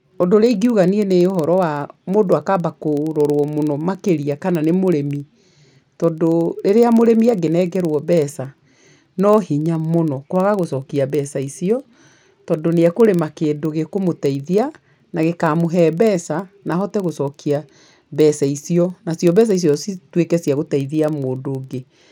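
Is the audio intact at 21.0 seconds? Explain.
No. At 21.0 seconds the speech carries the same fault that runs through the whole clip: a filter restarted on every block. The filter drops its memory at each block boundary and begins again from silence, so each block opens with a small transient. These ticks repeat about 21.5 times per second, which fits a 2048-sample block, and merge into a low buzz that grows and shrinks with the speech level. Unlike buffer-underrun clicks, the ticks are evenly spaced and leave no gaps in the sound.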